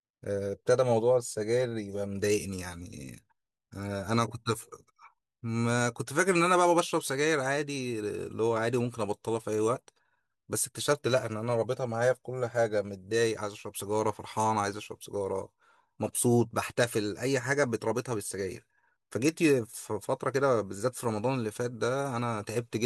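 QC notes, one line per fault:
No faults found in review.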